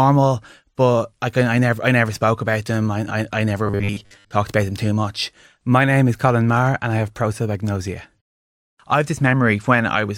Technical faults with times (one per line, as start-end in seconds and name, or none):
3.67-4.31 robotic sound from repeated short buffers